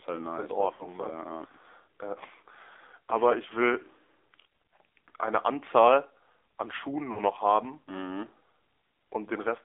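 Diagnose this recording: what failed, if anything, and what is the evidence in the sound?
AMR narrowband mobile codec, throughout the clip (codec stage): the speech sits in a 300 Hz to 3.5 kHz band with a buzzy, synthetic edge. The plainly audible damage points to a low AMR-NB rate, which fits 7.4 kbps, where a few excitation pulses drive a vocal-tract model.

Lost AMR speech frames at 0.74–0.85 s and 7.12–7.20 s (network/radio stage): brief smeared, drawn-out stretches that sag in level. The gaps fit three and two missing 20 ms frames, which the decoder concealed by repeating its last pitch and vocal-tract settings at falling gain.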